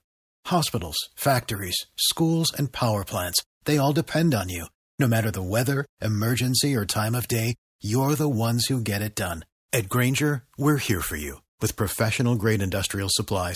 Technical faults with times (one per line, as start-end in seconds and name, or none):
none